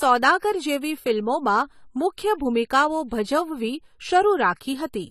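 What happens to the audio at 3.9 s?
At 3.9 s the speech carries AAC compression, present across the whole clip. Nothing sounds above about 14.1 kHz, and the top is dull and smeared, with a fizzy edge on sibilants. This is likely a low-bitrate AAC-LC encode, fitting roughly 32 kbps.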